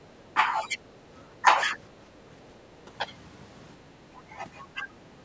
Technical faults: speech suppressed in double talk

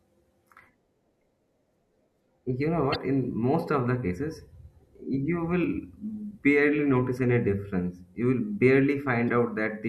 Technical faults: damaged data in a compressed stream

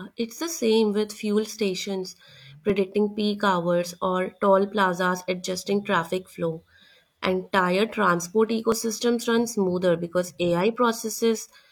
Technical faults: overlap between stream segments

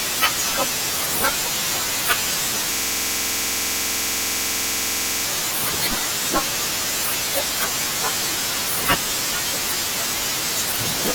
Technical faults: system hang loop

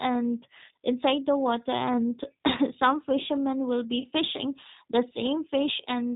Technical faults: G.729 codec; VoIP packet loss concealed by the speech codec

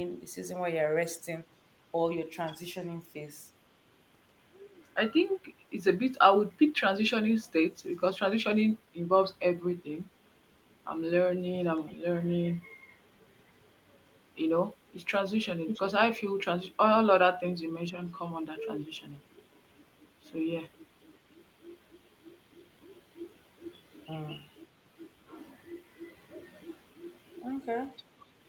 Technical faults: echo leak

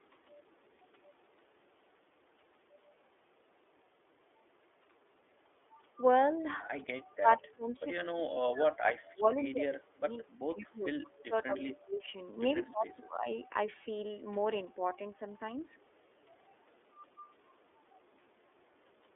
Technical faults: iLBC codec; echo leak; speech suppressed in double talk; lost iLBC frames

